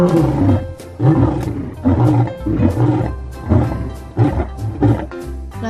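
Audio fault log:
throughout: MP2 compression. The sound is dull, with a gurgling, granular roughness. This is likely low-rate MPEG Layer II coding, fitting about 80 kbps. Too few bits switch upper sub-bands off, and the remaining bands are coarsely quantised and flicker.
0.80–0.94 s and 5.14–5.19 s: DAB burbling. Short bursts of burbling blips sit over the sound. Bit errors, a small fraction of a percent, slipped past error correction into the MP2 data. Corrupted samples put short blips of noise into single sub-bands.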